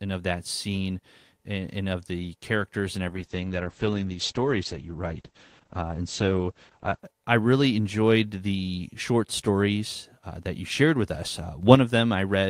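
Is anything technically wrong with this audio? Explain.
Yes, there are two problems. From 3.08 s to 7.07 s, right after "of the characters and" and up until "I really enjoyed the", you get a call bitrate drop. The call's bandwidth estimate fell, so the encoder had to squeeze the speech into far fewer bits. The coarseness fits a slide from around 32 kbps down to something near 9 kbps. The top end gets chopped from 20 kHz to 8 kHz, so it turns muffled and a bit watery until things recover.

The second one comes at 11.63 s, just after "you shared with us". There's a sudden gain jump there: the level steps up by about 6 dB in one go, with no ramp, and it lasts until about 11.75 s. The speech and the background noise both leap together. The likely cause is a digital gain setting or bit shift being applied instantly, sample to sample, and that makes the edge sound abrupt instead of smooth.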